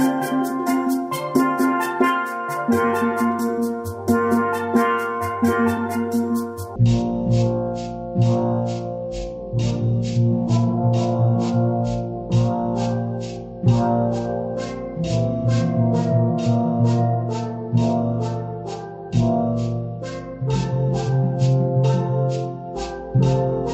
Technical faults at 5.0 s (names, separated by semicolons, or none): none